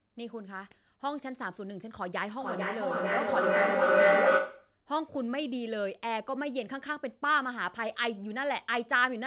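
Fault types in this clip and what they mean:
Feedback howl: sound looping between two call devices grows each pass into a tone near 700 Hz, pulsing about every 0.4 s, where echo fades.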